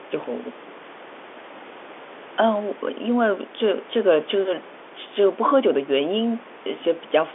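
The speech arrives as ordinary G.711 A-law telephone audio, held to the 300 Hz to 3.5 kHz line band with nothing above about 3.7 kHz, and a steady room noise sits about 20 dB beneath it.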